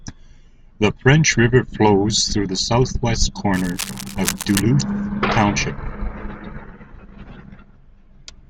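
A speech recording carrying a burst of cable scratch noise from 3.53 s to 4.62 s, right after "flows through the southwest". For just over a second, a dense, irregular rustling and crackling sits on top of the speech at roughly 10 dB below it. The likely cause is a worn lead, connector or control being moved, with its contact resistance fluctuating rapidly and injecting uneven noise into the signal.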